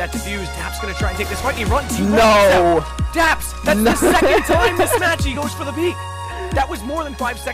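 No technical faults can be heard anywhere in the signal.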